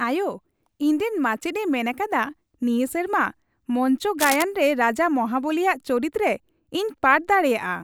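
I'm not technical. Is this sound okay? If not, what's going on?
No, not quite. At about 4.2 seconds there's a short burst of scratchy, rustling noise that lasts roughly a quarter of a second and ends near 4.43 seconds. It's nearly as loud as the speech, so it really stands out. This is cable scratch noise, likely from a worn cable or plug being moved: the electrical contact flickers for a moment, and that flickering comes through as a crackly scrape over the recording.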